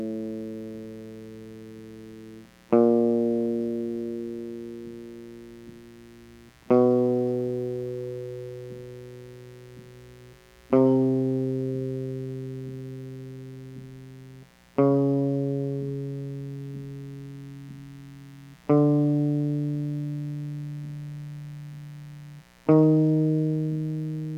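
A steady, raspy mains buzz sits under the music from start to finish, well below it. Sharp switching spikes twice per 60 Hz cycle, from a dimmer, rectifier or unshielded line, spray harmonics up into the kilohertz range.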